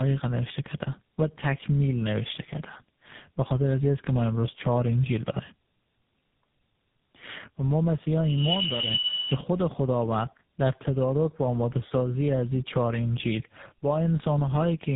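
Tandem speech coding runs throughout, with speech re-coded across links (fitting AMR-NB then GSM full rate). It sounds rough, noisy and muffled, with nothing above 3.8 kHz.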